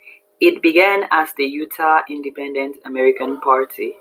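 No technical faults can be heard anywhere in the recording. Nothing interrupts or alters the speech at any point.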